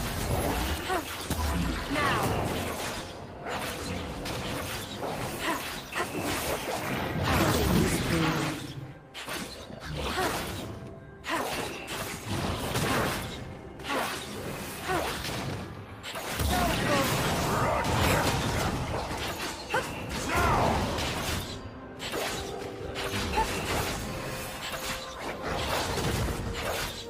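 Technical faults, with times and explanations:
No technical faults can be heard anywhere in the clip. There is nothing to report at any point.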